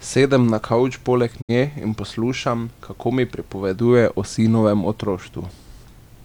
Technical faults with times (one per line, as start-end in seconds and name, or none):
1.40-1.51 digital broadcast dropout